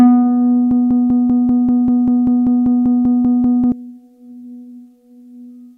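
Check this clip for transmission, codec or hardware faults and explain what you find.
One fault is present: a broken-record loop from 0.71 s to 3.72 s. The same 195 ms fragment repeats back to back about 15 times, like a stuck stutter. This likely comes from a stalled player or stream resending its last held fragment, so the original audio from that stretch is lost.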